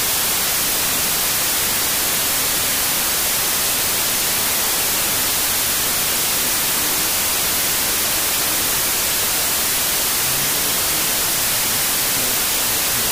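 Wrong sample width, throughout: audio written as 32-bit integers is read as 16-bit, so each sample splits into two values. Only the upper halves keep the true signal, buried in loud noise from the lower halves, and playback runs at half speed, an octave down.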